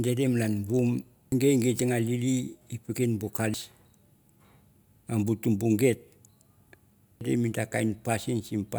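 A speech recording marred by damaged data in a compressed stream, heard as three brief glitches at 1.32 s, 3.54 s and 7.21 s. At each point the decoder hits corrupted bytes, misreads the frames and has to resynchronise on the next valid header. On a spectrogram each event appears as a thin vertical break cutting across the speech harmonics. In the waveform it shows as a short, abrupt discontinuity.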